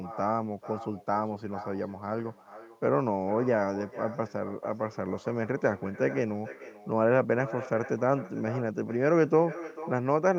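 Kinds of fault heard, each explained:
Echo with no canceller: the far end's microphone re-captures its loudspeaker unremoved, so every phrase returns roughly 0.4 s later, about 16 dB quieter and thinner.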